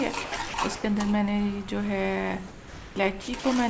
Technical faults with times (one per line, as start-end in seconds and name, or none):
0.24-0.84 sound dropped by the voice detector
2.48-2.96 sound dropped by the voice detector
3.22-3.44 sound dropped by the voice detector